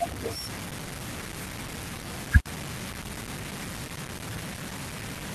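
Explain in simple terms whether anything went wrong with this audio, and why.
The speech sounds rough and gritty from start to finish, with a harsh grain nearly as loud as the talking that shifts as the voice changes. The likely cause is low bit depth without dither: the sound was cut down to about six bits, chopping off detail.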